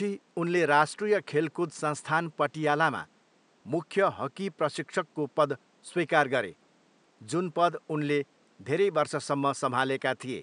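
No technical faults are audible.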